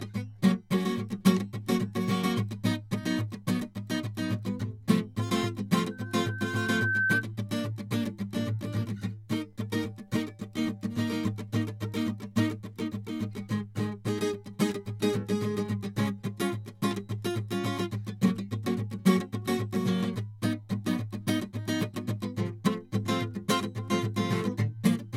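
A music clip with loudspeaker feedback squeal from 5.91 to 7.25 s. A 1.5 kHz tone swells over about a second, ending roughly 5 dB above the music.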